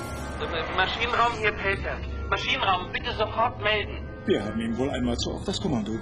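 At 1.12 s the sound switches abruptly, with no gap, to an adaptive stream at a lower bitrate and stays there to the end. The connection evidently slowed, so the player swapped to a much leaner encoding. From that point nothing is present above 11.1 kHz, the treble turns dull, and codec artefacts grow, which fits a drop from full AAC to a low-rate HE-AAC stream.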